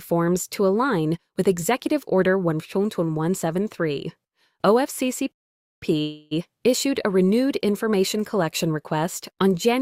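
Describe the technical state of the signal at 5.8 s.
At 5.8 s the output is still silent, in the last moments of a playback stall that runs from 5.32 s to 5.83 s, about half a second. The sound halts mid-flow and nothing is produced until the player recovers, most likely because its buffer ran dry or its thread was blocked. A short dropout or glitch lasts only a few milliseconds, but this is a single sustained silence long enough to register as a pause before the sound resumes.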